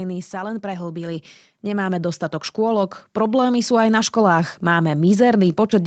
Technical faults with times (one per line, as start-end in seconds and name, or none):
0.30-3.98 automatic gain rising